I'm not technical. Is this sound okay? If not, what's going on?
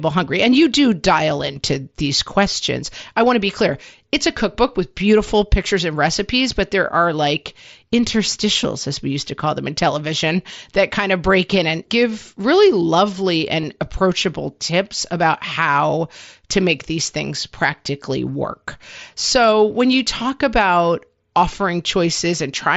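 No. There are two tiny glitches, both from concealed Bluetooth headset packet loss. At 8.64 s, just before "as we used to", there's a barely noticeable blip. From 13.61 to 13.63 s, between "and give really lovely" and "approachable tips about how", a brief buzzy tone replaces the speech, with a slight wobble as it resumes. In each case a few moments of sound never reached the phone from the headset, and the phone filled the gap by repeating the speech that had just arrived.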